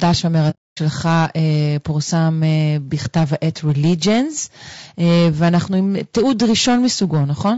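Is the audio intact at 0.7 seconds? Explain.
No. AAC frame loss with muting covers 0.50 to 0.79 s, so 0.7 seconds falls inside a hole about 270 ms long. The decoder had no data for that stretch, which fits roughly nine consecutive lost frames, and filled it with a zeroed spectrum. Because the overlapping windows fade the signal out at the start and back in at the end, the gap has soft edges. The sound simply drops to silence and returns.

The sound around that moment also carries two faults that run through the whole clip. Hard clipping comes from driving the speech about 8 dB past what the stage could pass, so the loudest peaks, a small share of the samples, are cut flat. Those flat tops add high harmonics, heard as crackle or harsh fuzz on the louder syllables on either side of the gap.

The speech also has a rough, grainy texture, with noise filling in between the pitch harmonics and a top band that sounds thinned or synthetic. 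This is the plainly audible damage of low-delay AAC compression, likely AAC-ELD at around 32 kbps. Its short frames resolve voice harmonics poorly and leave too few bits to code them cleanly.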